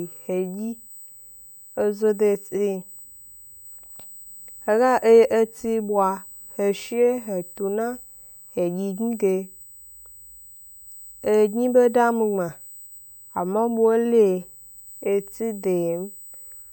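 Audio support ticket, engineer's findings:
USB whine across the whole speech clip, fixed tone at 8 kHz, strongest at 16 kHz, roughly 20 dB below speech. USB microframe current leaking via power/ground; not mains hum, no 50/60 Hz.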